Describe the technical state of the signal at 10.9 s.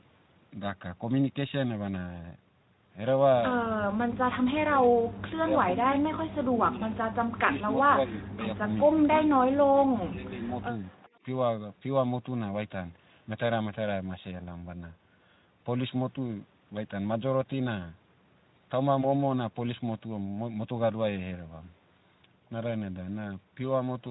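An echo leak runs from 10.76 to 11.09 s: a faint, delayed copy of the speech, about 0.4 s behind and well below it, likely where a far-end loudspeaker's sound reached its microphone and the echo canceller failed to remove it before sending it back.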